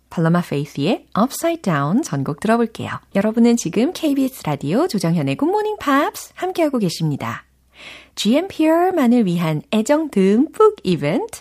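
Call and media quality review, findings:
Clock slip clicks, 0.1 to 11.39 s: a faint regular tick about every 30 ms, heard as a soft rattle over the speech and clearest on loud passages. Likely two devices on unsynchronised clocks, roughly 700 ppm apart. One sample is dropped or repeated at each slip.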